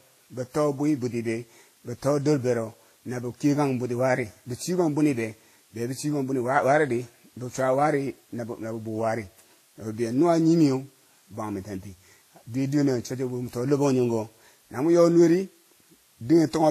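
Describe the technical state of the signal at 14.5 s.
At 14.5 s the speech carries a steady, even hiss. This is low bit depth with dither, present through the whole clip. The signal resolution fits about 9 bits, with dither added before rounding. The error becomes flat white noise, roughly 35 dB below the speech, with no distortion.

The sound also has nothing above 14.2 kHz. Two kinds of coding artefacts are heard together, which likely points to transcoding between lossy codecs, such as Vorbis followed by WMA 1. Each stage adds its own artefacts, and the lowest cut-off in the chain remains.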